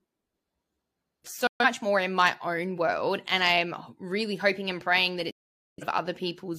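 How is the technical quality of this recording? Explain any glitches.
The recording has two digital broadcast dropouts. The first runs from 1.47 to 1.65 s, just before "more in my own". The second runs from 5.31 to 5.84 s, right after "hoping and praying that". In each, the receiver lost good frames and muted. The speech snaps to silence within about 3 ms, then resumes later. What was sent during the gap is gone. The second hole is longer, pointing to more corrupted frames.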